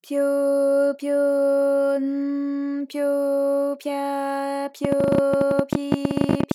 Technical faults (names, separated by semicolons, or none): train of clicks